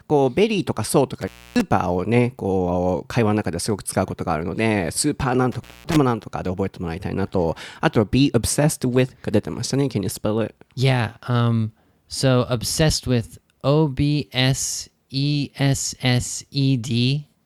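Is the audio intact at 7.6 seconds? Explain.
Yes, the audio is intact at 7.6 seconds, with no audible fault at that point in the speech.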